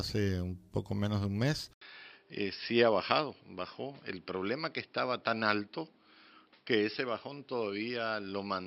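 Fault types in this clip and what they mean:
Input switched to a poorer device: At 1.73 s the speech drops out for about 80 ms, then returns duller and boxier to the end, with nothing above 5.4 kHz, a level roughly 5 dB lower and a new background noise sitting around 40 dB below the signal. The likely cause is the system changing its input mid-recording to a narrower-band microphone or headset call profile, which brings its own tone, level and noise floor.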